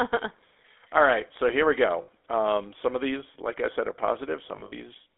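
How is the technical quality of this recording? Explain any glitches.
The recording is plainly degraded throughout by GSM full-rate coding, with two short dropouts.

Throughout, the speech sounds buzzy, gravelly and band-limited to roughly 300 Hz to 3.6 kHz. This is the GSM full-rate codec, whose pulse-driven vocal-tract model fits about 13 kbit/s, and its damage is plainly audible.

At 2.02 s, just after "right so here we", a 66 ms stretch rings metallically. These are lost GSM frames: the decoder repeats the last good frame. At 4.56 to 4.73 s, further lost frames are scattered over 160 ms, with the longest gap around 70 ms.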